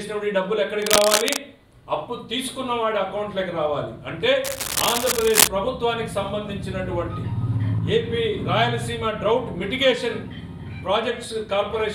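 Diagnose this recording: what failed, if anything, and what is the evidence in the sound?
Cable scratch noise appears twice, from 0.82 to 1.38 s and from 4.43 to 5.48 s, as dense rustling roughly as loud as the sound itself. This is likely a worn cable or connector in the analogue wiring, its contact resistance flickering as it moved. The spectrogram shows ragged broadband speckle, and the waveform shows jagged bursts.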